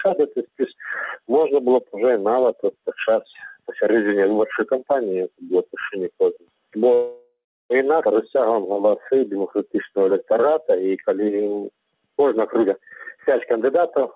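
From 2.55 to 2.91 s, the noise suppressor mistook part of the sound for noise and pulled it down by about 10 dB, so around 150 ms of it sinks in level.

At 6.94 s, the receiver ran out of audio, likely because packets were held up and the jitter buffer emptied. It filled 760 ms up to 7.72 s, including 330 ms of silence, before playback resumed where it had stopped. This call audio freeze inserts a gap, with nothing lost.

At 8.04 s comes a skip ahead: roughly half a second of audio was dropped and the two sides joined with only about 11 ms between them, so playback jumps abruptly forward.

From 8.38 to 12.08 s, a jitter buffer slow-down repeated short pieces to rebuild its reserve, adding 448 ms. The audio runs at 88% speed with unchanged pitch and sounds drawn out.

From 12.38 to 14.03 s, a jitter buffer speed-up trimmed roughly 400 ms to cut delay. The audio runs at 122% speed at the same pitch and sounds clearly hurried.

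Throughout, the call path shows nothing above 4 kHz, which fits G.711 mu-law at 64 kbps.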